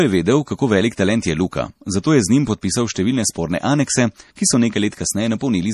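Speech with plainly audible MP3 compression throughout. Nothing is heard above 13.9 kHz, and weak detail swirls. The damage fits a low bitrate, likely around 40 kbps.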